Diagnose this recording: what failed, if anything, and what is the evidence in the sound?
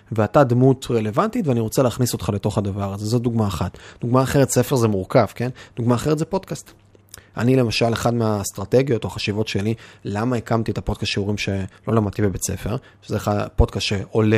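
Nothing failed: the sound carries no evidence of a fault at any stage.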